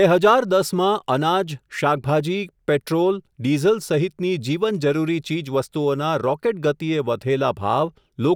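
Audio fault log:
No faults are audible anywhere in this speech recording.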